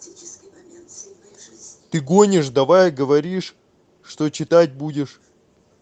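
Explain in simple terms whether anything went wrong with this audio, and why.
Nothing went wrong here.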